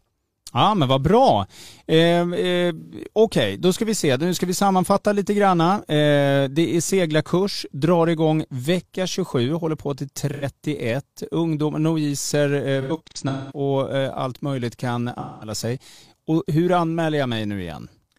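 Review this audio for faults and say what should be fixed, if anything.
Smeared, noisy patches break into the speech at 2.79–2.94 s before "okay då ska vi", 10.33–10.44 s after "håller på till", 12.81–13.60 s, and 15.20–15.52 s between "allt möjligt kan" and "sig och hur anmäler". This is AAC frame loss with concealment. Between 85 and 427 ms of audio went missing per event, and the decoder filled each gap from the last good spectrum. The 12.81 s stretch is the worst: its losses are scattered over about 0.7 s, with the longest run lasting around a fifth of a second.

Adding forward error correction or retransmission to the AAC stream would prevent these gaps.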